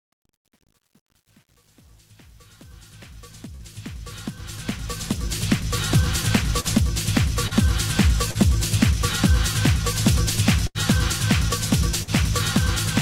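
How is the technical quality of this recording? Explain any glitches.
The recording has several glitches. A gritty, under-resolved fade opens it, and there are repeated dropouts from lost packets.

Truncation distortion on a fade runs from 0.0 to 5.65 s. It is worst from 0.0 to 4.33 s. The fade was processed at what sounds like 9-bit resolution, with no dither. Near the smallest level step, the smooth waveform collapses into a few square steps. The quiet part of the fade therefore sounds gritty rather than clean.

There are three bursts of packet loss: 3.55 to 3.63 s, 10.67 to 10.78 s, and 12.03 to 12.10 s. Audio failed to arrive in time. The receiver extended the last sound and let it fade, filling about 45 ms, 78 ms and 46 ms. About 40 ms, 80 ms and 40 ms of real audio are missing. Playback then jumps ahead.

Short concealed packet loss occurs at 6.60 to 6.82 s, 7.47 to 7.54 s, and 8.31 to 8.38 s. 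In each case about 40 ms never reached the decoder. The receiver patched the holes with continuations of the preceding sound, about 44 ms, 35 ms and 40 ms long. It then blended back into the real audio. The first event also drops a further 11 ms. These are heard as brief smears or wobbles.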